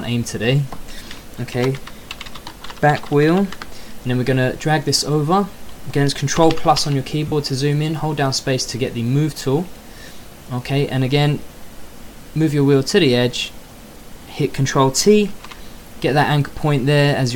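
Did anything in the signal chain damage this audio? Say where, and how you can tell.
Yes. Lost LE Audio frames on the Bluetooth link at 7.28–7.32 s leave a 37.5 ms noisy smear, where the LC3 decoder refilled the gap by reusing the last spectrum with randomised signs.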